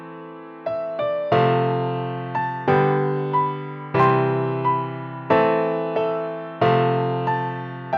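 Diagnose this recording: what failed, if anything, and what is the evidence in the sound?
Nothing in the signal chain has failed: no stage from wiring to playback leaves any audible evidence of a fault.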